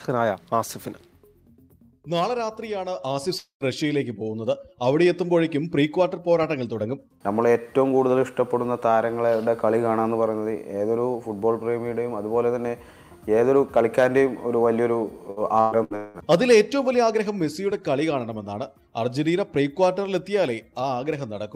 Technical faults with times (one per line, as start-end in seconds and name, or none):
3.37-3.63 long network dropout
15.30-16.17 repeated packet loss (robotic sound)